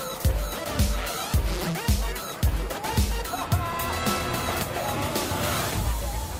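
Nothing technically wrong can be heard anywhere in the clip.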